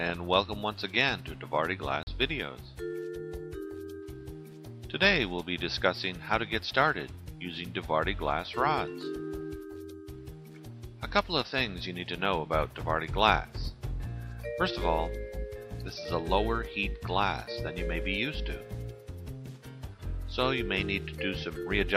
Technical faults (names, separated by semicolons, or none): block of digital silence